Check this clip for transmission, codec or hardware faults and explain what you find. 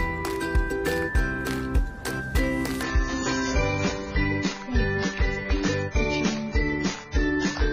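One fault is present. From 2.83 s to the end, the sound abruptly turns dull and grainy, with nothing above 7 kHz and more codec artefacts, but no gap. This is an adaptive stream at a lower bitrate: the player switched to a smaller encoding when throughput fell, and the sound points to a drop from about 96 to 16 kbit/s AAC.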